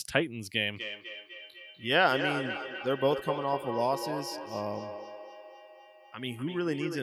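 From 0.73 s to the end of the clip the speech carries feedback echo between two devices. Each phrase returns roughly 300 ms later, at a steady interval, with the repeats peaking at about 7 dB below the direct speech. This happens when two devices in the same room join one call: one plays back what the other captured, that microphone picks it up again, and neither echo canceller removes sound coming from the other device's loudspeaker.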